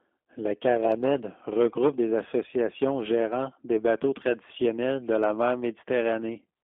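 Throughout, a G.729 codec rebuilds the speech from a filter and sparse pulses within a 250 Hz to 3.5 kHz band, sounding plainly rough and synthetic.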